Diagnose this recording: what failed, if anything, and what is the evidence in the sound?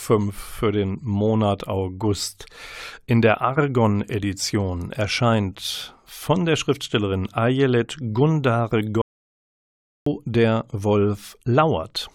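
The speech cuts off abruptly at 9.02 s and returns mid-flow at 10.06 s, leaving about 1.05 s of dead silence with no room tone. This is an audio dropout to silence, likely an input device or link failing while the recorder kept writing silence.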